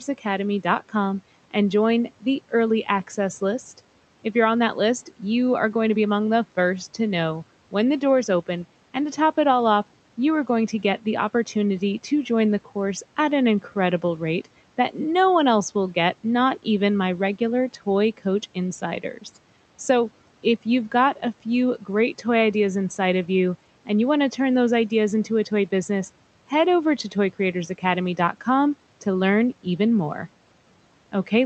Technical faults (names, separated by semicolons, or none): speech cut by the noise suppressor